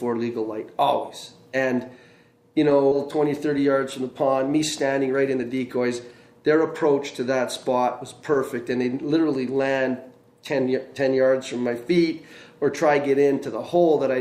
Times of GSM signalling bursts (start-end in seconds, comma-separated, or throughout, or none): none